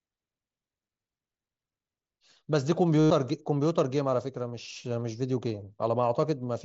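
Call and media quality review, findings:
Buzzy, level-held tonal drone from 3.00 to 3.10 s (about 105 ms), slight warble as real speech resumes. Component: Bluetooth headset link, concealed Bluetooth headset packet loss. Mechanism: run of lost voice packets, fits roughly 14 consecutive frames, gaps filled by looping best-matching recent waveform. Audio otherwise band-limited near 8 kHz with light graininess, consistent with the mSBC headset codec.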